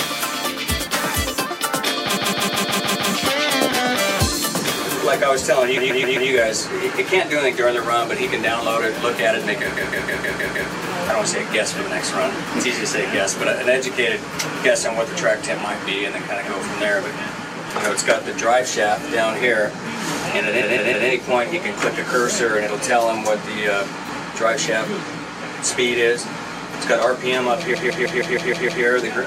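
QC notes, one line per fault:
2.16 to 28.83 s, repeated frames: five stutters, at 2.16 to 3.10 s, 5.76 to 6.29 s, 9.76 to 10.70 s, 20.60 to 21.07 s and 27.73 to 28.83 s. Each time, a short block of compressed audio plays again three to seven extra times. The block is about 157 ms, or 131 ms at 5.76 s. Each event adds 0.47 to 1.10 s to the running time.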